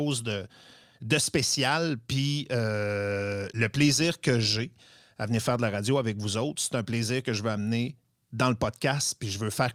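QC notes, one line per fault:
No faults found in this speech recording. Nothing needs flagging for QC.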